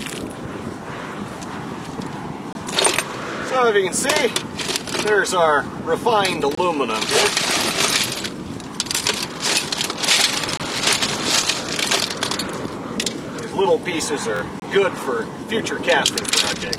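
The audio is interrupted by a regular gap between chunks: short holes of about 23 ms at 2.53, 6.55, 10.57 and 14.60 s. They fall about 4 seconds apart, which points to the stream being delivered in 4-second pieces with a sliver of silence left at each join, from codec padding or a player starting each piece a touch late. Nothing goes missing; the sound just drops out and picks up where it was. There's also a Bluetooth stutter from 14.37 to 14.41 s, just before the last gap. Around 46 ms of audio didn't arrive in time, which fits roughly two lost packets, and the receiver filled the hole by replaying its last short slice, so you get a brief buzzy repeat. Then the sound jumps ahead as though it had kept playing.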